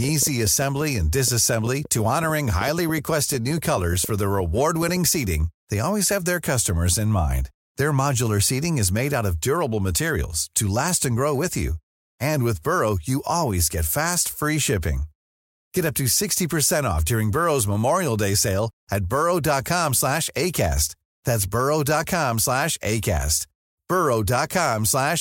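From 0.04 to 4.97 s there's a train of clicks, about 6.7 per second at uneven spacing, popping a bit above the speech, likely from interference.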